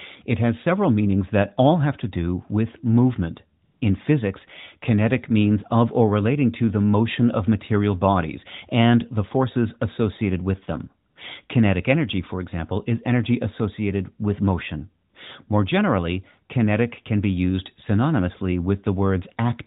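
At 3.64 to 3.82 s, 11.10 to 11.16 s and 15.10 to 15.14 s, AMR comfort noise stands in for the real background: speech frames stopped, so a smooth synthetic hiss briefly switches in.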